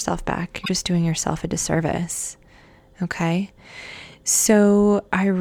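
A brief garbled blip cuts through the speech from about 0.62 to 0.69 s, just before "doing yourself a disservice". This is damaged data in a compressed stream: corrupted bytes made the decoder misread those frames and lose sync until it found a valid frame header again.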